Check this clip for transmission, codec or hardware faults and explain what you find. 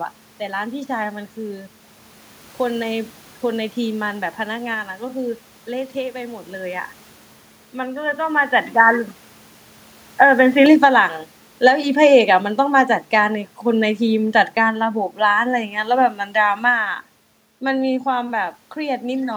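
Two faults stand out in this speech clip, both on the input side rather than in transmission or coding.

From 6.55 to 10.66 s, the sound behaves as if the input switched to a poorer device. The likely cause is the system changing to another microphone or a headset's call profile. That path passes nothing above 3.8 kHz, so the voice turns dull and boxy at once, with no silence at the switch. The level barely changes. Faint new background noise sits far below the speech. A change in loudness near 8 s is the talker moving, not part of this fault.

From 11.52 to 16.94 s, the automatic gain is falling. The gain control judged the input too loud or its background noise too strong and lowered its gain gradually, by about 8 dB overall. The voice starts strong and then sinks steadily. The room noise sinks with it, which shows the change comes from the gain stage and not from the talker.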